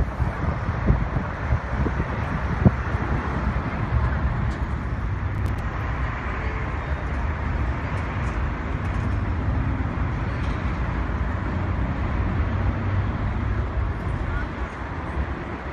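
Processor overload crackle from 5.35 to 5.59 s: the processor repeatedly failed to deliver its short audio buffers, around 5 ms each, on time. About seven missed deadlines left hard-edged gaps of silence, heard as a quarter-second burst of gritty crackle riding on the sound.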